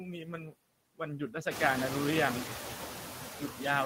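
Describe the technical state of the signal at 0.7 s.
At 0.7 s the speech carries noise suppressor artifacts, present across the whole clip. The suppressor pulls down bands it judges to be steady noise, here by about 6 dB, so the residual background dips and swells with the speech, ahead of the room noise's rise around 1.5 s.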